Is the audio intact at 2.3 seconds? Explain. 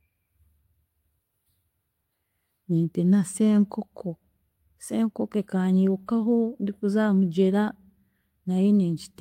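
Yes, the audio is intact at 2.3 s, with no fault at that moment.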